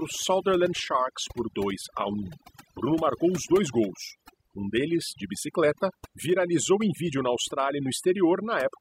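Speech with overdone noise removal throughout the clip. The noise reduction has been pushed too hard, so any frequency band near the estimated noise floor is cut deeply or removed. Low-level parts of the voice fall below that threshold and go with the noise. The background drops and breaks up into twinkling specks where isolated bands flicker on and off.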